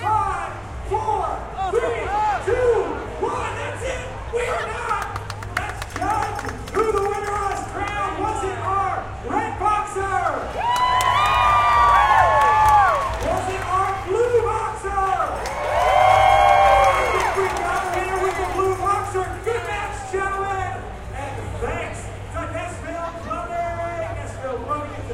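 From 12.50 to 15.17 s, a faint, regular ticking sits well beneath the everyday sounds. This is Wi-Fi interference: a nearby Wi-Fi radio's beacon transmissions, every 102.4 ms, are picked up and rectified by the audio circuit, turning each radio pulse into an audible click. The result is a steady tick just under ten times a second. A GSM phone's chattering buzz is much denser, and mains hum is a continuous tone rather than separate clicks.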